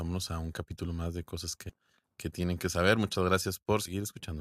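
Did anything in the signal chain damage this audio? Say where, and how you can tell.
Yes, at the codec stage: compressed frames skipped at 1.69–1.73 s, between "capítulo más de cosas" and "que tienen que saber", and at 3.85–3.93 s. The sound jumps ahead roughly 150 ms and 70 ms, fitting whole 20 ms frames. Unlike a dropout, there's no silence; the audio simply jumps ahead past the missing frames.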